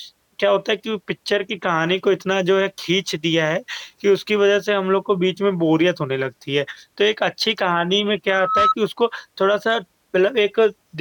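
From 8.28 to 8.75 s, loudspeaker feedback squeal appears. A microphone catches its own loudspeaker. A 1.3 kHz tone swells fast, peaking just above the speech.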